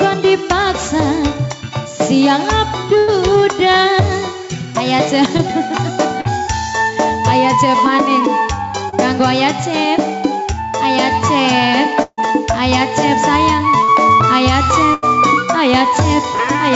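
Throughout the clip the background level rises and falls by a few decibels: it swells in the pauses and sinks under each loud sound. This gain pumping is likely from input gain set far too high, with a fast limiter or compressor clamping down on every peak. On a waveform the quiet gaps ramp up and loud passages look flattened to a similar height. A spectrogram shows the noise floor brightening between events and dimming under them.

The first burst of packet loss comes at 2.98 to 3.09 s, about 100 ms of audio lost in transit. The receiver stretches the last sound forward and fades it, which makes a held buzz or decaying hiss before playback jumps ahead with that stretch missing. At 12.02 to 12.19 s a longer burst of about 160 ms fades all the way to silence for its final 50 ms. The third is at 14.94 to 15.04 s, about 80 ms. On a spectrogram each shows smooth, repeated or fading bands where real detail should be, then a sudden resumption. 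The waveform shows a tapering envelope, at 12.02 s a brief flat gap, and an abrupt restart.

Short concealed packet loss appears at 5.37 to 5.41 s, 6.21 to 6.27 s, 8.89 to 8.94 s and 13.84 to 13.90 s. At each, 20 to 40 ms failed to reach the decoder in time and was patched by extending the preceding sound, then blended back in. These are heard as a quick smear or wobble, and a brief transient may drop out. A spectrogram shows short smudged slivers, and the waveform shows slight irregularities in shape.

Above 8 kHz the spectrogram is empty throughout, consistent with a wideband call codec such as G.722.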